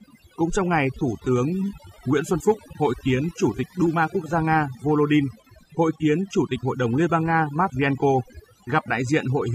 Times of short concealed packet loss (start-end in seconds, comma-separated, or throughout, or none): none